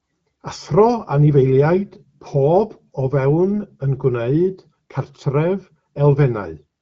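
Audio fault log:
3.52–3.58 s, AMR bit errors: For about 66 ms, roughly three 20 ms codec frames, the speech turns hoarse and gargly while pitch and loudness hold. A few percent of the weakly protected bits arrived flipped, so the excitation pulses land in the wrong places and the fine gain and spectral values drift. A spectrogram shows smeared, noisy harmonics and a ragged upper band inside the speech's 7 kHz limit, which fits AMR-WB at 12.65 kbit/s. The waveform envelope stays intact.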